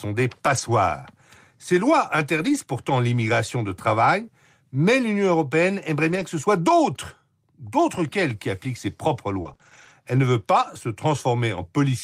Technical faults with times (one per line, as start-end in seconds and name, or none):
0.45-0.59 lost packet rebuilt from error correction
2.37-2.55 lost packet rebuilt from error correction
6.07-6.21 lost packet rebuilt from error correction
9.41-9.91 repeated packet loss (robotic sound)